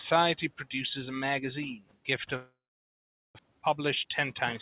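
Noise suppressor artifacts run through the whole clip. The suppressor pulls the steady background down by about 18 dB in each band, frame by frame. The noise dips between phrases and swells under them. The band stops near 4 kHz, which fits narrowband G.711 call coding.

From 1.77 to 2.08 s comes speech cut by the noise suppressor. It mistakes part of the speech for noise and turns it down by up to about 19 dB. For roughly 150 ms the sound goes faint and swallowed.

From 2.36 to 3.41 s there is a long gap, likely a network dropout. The last sound is stretched into a fading buzz or hiss. Then about 0.78 s of silence follows. About 0.74 s of audio never plays, and delay grows by around 300 ms.

From 3.48 to 4.46 s a jitter buffer speed-up follows. The receiver trims short pitch-period slices over and over to drain the delay it built up. Roughly 100 ms goes. Speech runs at 110% speed, same pitch, and sounds hurried.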